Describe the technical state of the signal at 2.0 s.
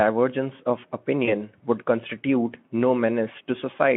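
At 2.0 s the speech is intact, with no fault present, only the narrow telephone-style band of the Speex codec carrying it as usual.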